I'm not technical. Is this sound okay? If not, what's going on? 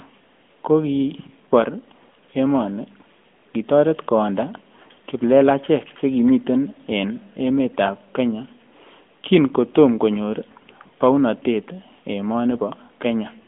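No. An AMR narrowband mobile codec runs through the whole clip. This is the old phone-call speech coding: it keeps only roughly 200 Hz to 3.4 kHz, losing the highs that give speech its crispness, and rebuilds the voice from a simple model, leaving a plainly buzzy, synthetic edge.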